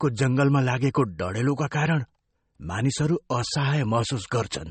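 Throughout the speech, nothing is heard above 8.4 kHz, so it sounds dull and muffled, with a smeared, coarse texture. This is likely low-bitrate audio saved at a high bitrate. The sound fits a roughly 32 kbit/s MP3 re-encoded much higher, which cannot restore what was stripped.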